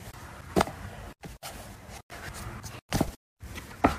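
No technical faults can be heard anywhere in the recording. Nothing in the sound needs a time or a value noted against it.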